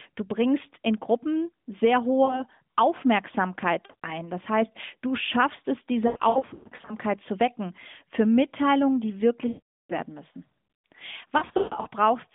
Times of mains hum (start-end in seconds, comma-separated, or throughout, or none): none